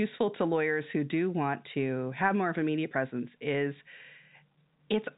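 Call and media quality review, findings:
Nothing stood out on listening to this speech clip, which carries the narrowband telephone sound expected of G.711 A-law coding.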